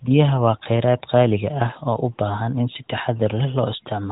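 No technical faults can be heard anywhere in the speech. It carries through an AMR narrowband mobile codec path that works as intended: nothing above about 3.8 kHz comes through, and the light codec colouring fits the 12.2 kbps mode.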